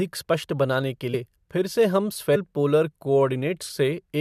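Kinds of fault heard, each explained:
Compressed frames skipped: at 1.13 s and 2.35 s the speech jumps forward, losing roughly 150 ms and then roughly 300 ms, which fits whole 21.3 ms frames missing or rejected by the decoder.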